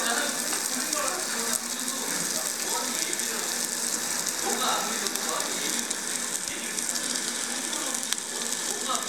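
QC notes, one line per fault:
No technical faults are audible anywhere in the clip.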